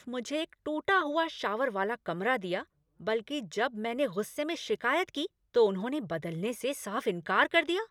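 No technical faults occur in this speech at any point.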